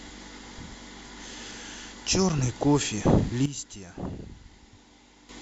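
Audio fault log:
3.46–5.29 s, sudden gain jump: a gain setting was likely applied instantly, between one sample and the next, with no ramp, so at 3.46 s the speech and its background noise drop together by about 12 dB and stay lowered until 5.29 s.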